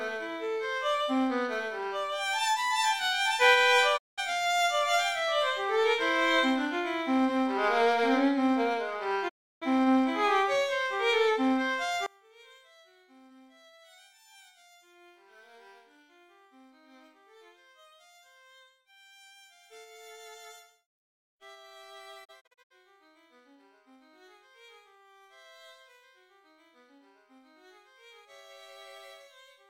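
Three digital broadcast dropouts cut the sound to silence, each entering and leaving with a quick fade of about 20 ms. The first runs from 3.96 to 4.20 s, the second from 9.28 to 9.64 s, and the third, from 22.24 to 22.72 s, is a cluster of short holes whose longest gap is 64 ms. The muted stretches come to about 0.19, 0.32 and 0.19 s, which fits whole 32 ms frames being discarded after failing to decode. Unlike a level fault, each dropout leaves true silence, and whatever was sent during the gap is gone before the audio resumes. From 12.06 s to the end, the level falls by about 30 dB and only a faint residue remains, most likely one channel inverted and then summed to mono so that the centred content cancels. It differs from a dropout because it never goes fully silent and does not recover. The faint copy persists for the rest of the clip.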